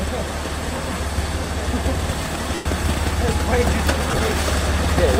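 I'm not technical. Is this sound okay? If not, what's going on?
No. There are lost LE Audio frames at 2.55–2.66 s and again at 4.11–4.19 s, where several short dropouts are scattered together. The Bluetooth link dropped bits of audio, and the player covered each gap with a scrambled, fading copy of the sound just before it.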